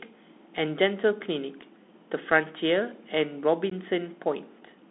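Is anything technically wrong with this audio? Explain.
Yes, the speech was carried over a Bluetooth headset link, and it shows.

Bluetooth CVSD headset codec, throughout: this one-bit delta coder tracks the waveform with an adapting step, and the sound fits a 64 kbps CVSD link. The band runs roughly 200 Hz to 3.7 kHz, so speech sounds thin and muffled, with scratchy sibilants and a granular hiss underneath.

Unconcealed Bluetooth headset packet loss, around 3.70 to 3.72 s: about 15 ms of audio, likely a couple of packets, was lost between headset and phone and was replaced by silence or an idle pattern. The result is a brief, hard-edged gap, and the speech resumes quieter for a moment.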